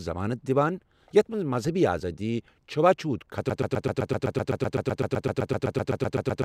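This speech clip runs normally until 3.50 s, when it falls into a broken-record loop. A fragment of about 130 ms repeats exactly, back to back, about 23 times. The loop holds until the clip ends. The speech that should have followed is gone. The tight, identical repeats point to a stall. The likely cause is a player, encoder or stream that stopped advancing and kept resending its last buffered piece.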